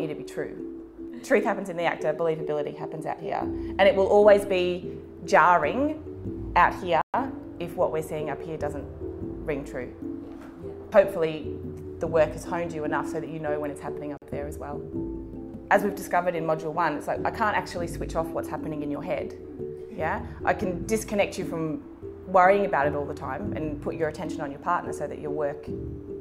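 Bluetooth stall at 7.01 s and 14.17 s: the sound drops to silence for 124 ms, then 45 ms, and resumes, likely the headphones' buffer emptying while interference delayed packets.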